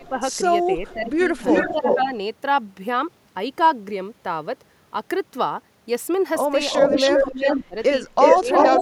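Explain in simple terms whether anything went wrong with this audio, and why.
Speech suppressed in double talk shows up from the start to 2.12 s, again from 6.88 to 7.76 s, and from 8.39 s to the end. In these stretches the voice sinks in level, in total about a second in the first stretch, and more sharply in the middle one. The likely cause is that both ends of the call were talking at once, and the echo-cancelling software, unable to tell the real talker from the loudspeaker's sound, turned everything down together.

Echo leak is heard as delayed copies of the voice. There is a faint scrap at 0.88 to 0.94 s, arriving 444 ms late. A much stronger copy, as loud as the speech itself and 359 ms behind it, runs from 1.47 to 2.02 s and again from 6.71 s to the end. This likely happened because a speakerphone's microphone picked up the call's own sound and its echo canceller failed to remove it, so it was sent back.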